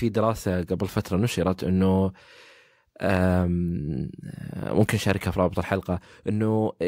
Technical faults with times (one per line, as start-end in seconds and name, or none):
none